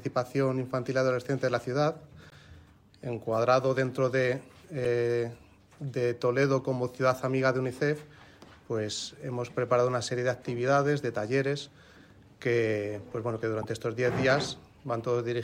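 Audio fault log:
2.30–2.33 s, 4.85 s, 13.62–13.64 s: damaged data in the compressed stream. Each is a brief glitch where the decoder hits corrupted frames, loses sync and hunts for the next header.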